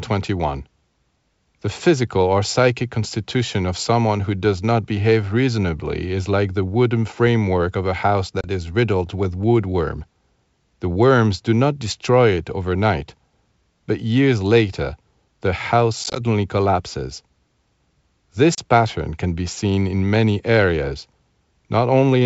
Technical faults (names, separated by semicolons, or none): packet loss on an ADPCM call